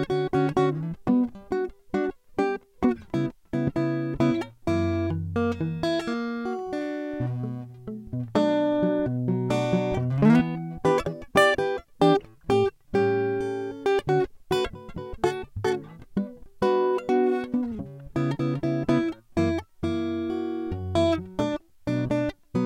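At 3.67 to 3.70 s a single loud pop cuts across the music, peaking several decibels above it for roughly 25 ms. It is most likely a sudden voltage step from a plug, switch, static discharge or driver glitch, which the following circuits shaped into a short thump. The music carries on unbroken underneath, which sets it apart from a dropout or an edit click, and it happens only once, unlike recurring crackle.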